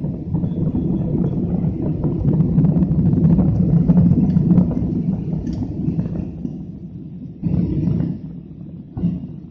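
The audio plays cleanly until 6.89 s, then switches abruptly, with no gap or dropout, to a duller version that lasts to the end at 9.50 s. In that final stretch nothing is audible above 6 kHz, and codec artefacts become more noticeable. This is an adaptive stream at a lower bitrate, stepping down mid-play after the connection slowed. The loss of treble points to a drop from around 96 kbit/s to about 24 kbit/s AAC.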